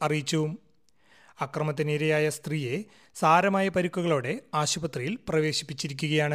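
No faults can be heard anywhere in the clip.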